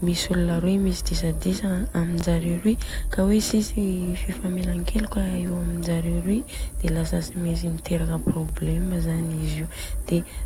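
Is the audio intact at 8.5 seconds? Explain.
No. At 8.49 s there is a repeated buffer: fresh audio arrived late, so the device played its last chunk of speech once more, a piece about 10.7 ms long that fits a 512-sample buffer. The hard join makes it a brief click. Unlike a dropout, nothing goes silent and essentially no audio is lost; the same fragment simply sounds twice.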